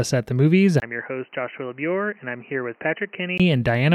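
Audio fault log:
0.8–3.4 s input switched to a poorer device: after a 20 ms gap, speech turns dull, about 10 dB quieter, spectrogram blank above 3 kHz with a faint new noise floor, likely another microphone.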